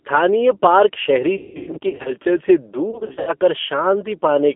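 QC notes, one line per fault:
Throughout: G.729 codec. The speech is cut to a narrow phone band of about 250 Hz to 3.5 kHz, and the codec damage is plainly audible. It sounds rough and slightly synthetic, which fits an 8 kbit/s G.729A stream. Each 10 ms frame is rebuilt from a vocal tract filter and a few pulses.
1.37–2.13 s and 2.91–3.33 s: VoIP packet loss concealed by the speech codec. In the first stretch, about 440 ms of audio is missing across 680 ms, with the longest gap near 180 ms. In the second, about 240 ms is missing across 360 ms, with gaps up to 80 ms. The decoder stretches the last sound into a fading buzzy tone or coloured noise. The speech stays weak for a while after each gap.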